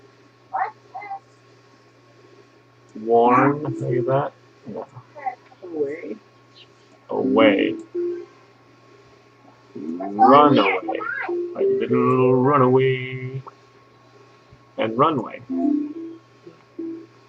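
Nothing in the audio stood out as a problem on listening.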